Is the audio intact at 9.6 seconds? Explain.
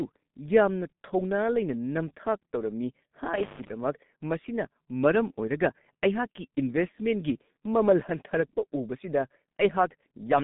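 No. At 9.6 s, as throughout the clip, the speech carries G.723.1 codec damage: nothing above 3.8 kHz, and a slowly updated voice model at a rate that points to about 6.3 kbit/s leaves it muffled and hoarse with smeared consonants. A plain low-pass filter would dull the sound without that rough, blurred coding texture.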